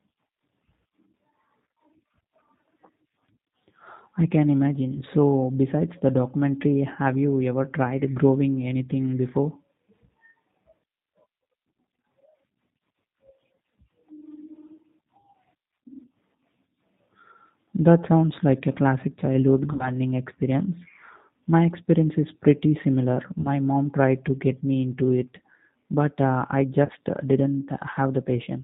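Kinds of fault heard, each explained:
G.729 codec: The speech is rebuilt at a low rate from a vocal tract filter, a pitch predictor and sparse pulses. Nothing above 4 kHz passes, and a plainly rough, synthetic edge runs throughout, which fits 8 kbit/s G.729A. Unlike simple band-limiting, the roughness comes from the coarse excitation itself.
VoIP packet loss concealed by the speech codec: At 19.73, 23.41 and 26.85 s the decoder fills missing frames from its last pitch and filter, stretching the sound into a fading buzzy tone or coloured noise. The gaps last about 60, 40 and 40 ms. Unlike a plain dropout, there's no silence, and the speech stays weakened briefly afterwards.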